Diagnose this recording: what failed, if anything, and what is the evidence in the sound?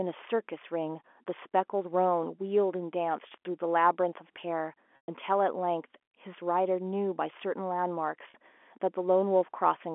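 Packet loss with pitch repetition at 4.96–5.08 s and 8.30–8.34 s: lost network packets are bridged by repeating the last pitch period, a buzzy hold that fades within the 120 ms gap.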